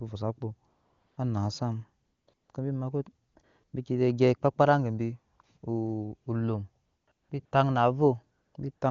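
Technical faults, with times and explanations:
0.73 to 8.81 s, AMR comfort noise: the phone judged the talker silent and stopped sending speech frames 14 times, for 20 to 440 ms each, longest at 0.73 s. Smooth synthetic noise replaces the real background, switching in and out around "bi taŋ na" near 7.1 and 8.4 s.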